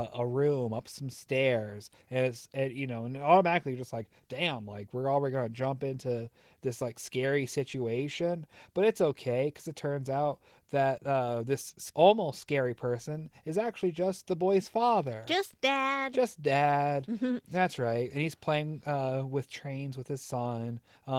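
Nothing here trips a fault anywhere along the way, so there's nothing to point to or time-stamp in this bit of speech.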